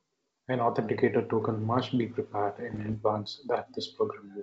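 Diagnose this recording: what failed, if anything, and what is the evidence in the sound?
It's the transmission link: bit errors on an ADPCM link, from 2.70 to 2.97 s right after "token must be prepared", giving pops and rough bursts with quick level jumps. Each flipped bit knocks the decoder's step size and predictor off, so the damage rings on briefly.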